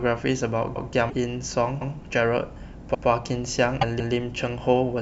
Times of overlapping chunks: 0.76-0.90, 1.81-1.95, 2.94-3.08, 3.99-4.13

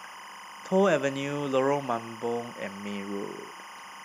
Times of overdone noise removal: none

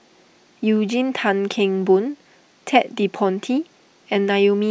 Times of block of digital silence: none

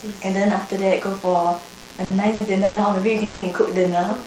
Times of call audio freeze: 3.24-3.45

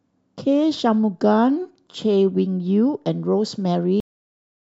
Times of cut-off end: 4.00-4.63

